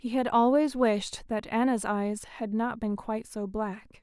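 A short speech recording, with no technical fault to be heard anywhere in it. Nothing in the audio calls for a time stamp or a cause.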